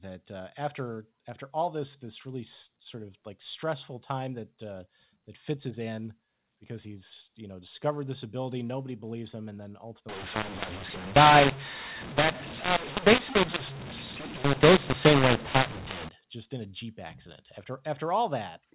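From 10.09 to 16.09 s, a mu-law and A-law mix-up decodes A-law samples as mu-law, scrambling levels: speech turns harsh and distorted, and pauses fill with noise.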